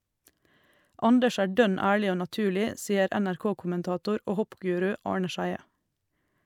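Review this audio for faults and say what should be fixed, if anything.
No faults found; nothing to fix.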